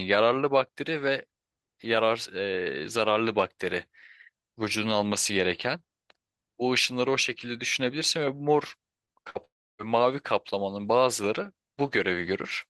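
Speech, with repeated packet loss (robotic sound) from 9.05 to 9.37 s: four short holes, the longest 53 ms, are patched by extending the preceding sound, so roughly a third of that span comes out choppy with pieces missing. Right after, from 9.45 to 9.81 s, the audio cuts out for about 340 ms, likely a long network dropout: a brief carried-over tail gives way to about 300 ms of silence, and speech resumes with that section gone.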